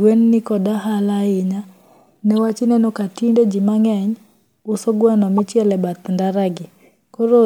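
A short blip at 2.37 s and a louder chirp from 5.38 to 5.40 s are corrupt frames decoded: flipped bits in a few compressed frames put energy at the wrong frequencies.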